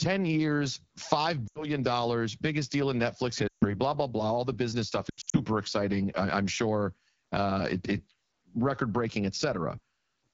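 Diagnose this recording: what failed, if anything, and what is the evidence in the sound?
Speech sounds rough and raspy throughout. At the codec stage, the AMR wideband (HD Voice) codec running at a low 8.85 kbit/s cannot model the voice cleanly.

Speech drops to near silence at 1.48 to 1.69 s, 3.48 to 3.65 s and 5.10 to 5.37 s. These are lost AMR speech frames on the radio link, concealed by the decoder replaying stale pitch with decaying gain.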